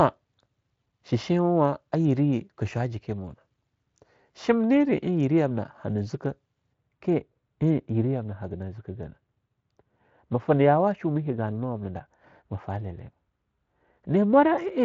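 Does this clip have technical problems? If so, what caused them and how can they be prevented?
Yes. From 6.73 s to the end, wrongly applied de-emphasis rolls the treble off smoothly, about 14 dB down at 10 kHz, so the speech turns dull and muffled. Only use de-emphasis where pre-emphasis was actually applied, and make sure it runs once.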